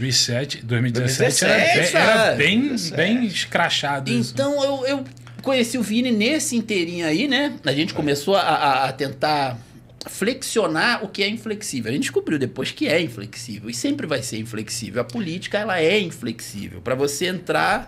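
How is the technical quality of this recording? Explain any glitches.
The recording's technical quality holds up, and there are no glitches to explain.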